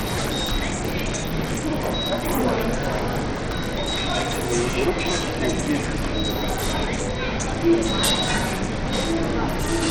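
From the start to the end of the clip, the everyday sound carries what is likely Bluetooth SBC compression. The treble flickers and drops away, with gritty grain and aliasing on top. Too few bits leave the upper sub-bands starved and the rest coarsely quantised, which fits a bitrate near 80 kbps.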